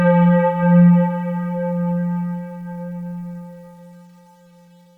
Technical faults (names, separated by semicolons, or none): time-stretched section